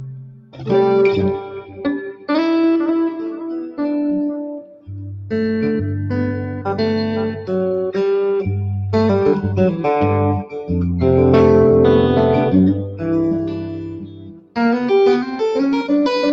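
Throughout the clip, a noise suppressor applied to music or sounds treats sustained tones and decays as background noise, so the level swings by around 10 dB. Onsets pass while held material sinks, giving a pumping, thinned character within the 8 kHz band of the call path.

Sound cut by the noise suppressor is heard at 0.12–0.68 s (drop of about 17 dB), 1.55–1.81 s (about 10 dB), 2.13–2.29 s (about 10 dB), 4.61–4.89 s (about 17 dB), 12.84–13.09 s (about 12 dB) and 13.38–14.57 s (about 18 dB). Each time, sustained or fading content sinks or has its tail cut short.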